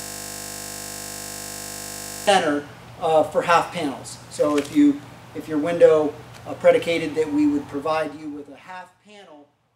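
A steady 50 Hz buzz fills the audio from the very start to 2.27 s, already under way as it begins. This is a system hang loop: the system froze while the sound hardware kept replaying the same 20 ms stretch of buffer, over and over.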